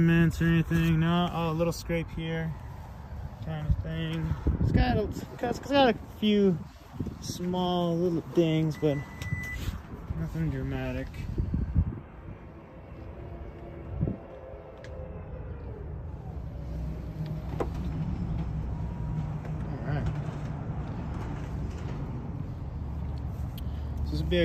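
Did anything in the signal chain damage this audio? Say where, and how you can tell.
No, nothing in the signal chain stood out as damaging this audio on listening.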